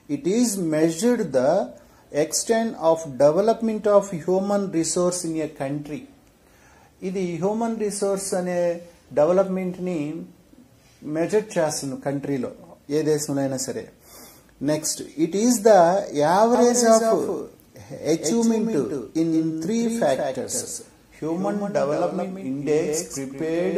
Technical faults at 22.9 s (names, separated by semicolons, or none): doubled audio track